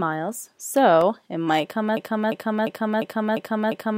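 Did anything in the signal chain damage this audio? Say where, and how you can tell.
Yes. At 1.01 s, just before "it might come", a repeated buffer at the driver or buffer stage produces a brief click-buzz. A 1.33 ms fragment plays two extra times, which fits a 64-sample buffer arriving late. Unlike a loop, it passes within milliseconds and normal playback resumes.

From 1.97 s, right after "it might come", a broken-record loop repeats one 0.35 s fragment exactly, six times, to the end. The cause is likely a stalled player or stream resending its last fragment. It differs from the stutter because the piece is longer, persists for seconds and never recovers.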